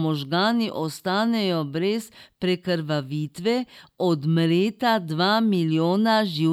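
Nothing in this speech recording stands out as a technical fault; it just runs along without any glitches to point to.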